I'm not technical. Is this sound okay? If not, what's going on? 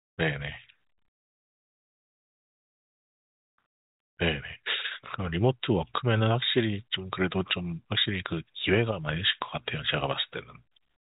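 Yes, nothing here sounds wrong.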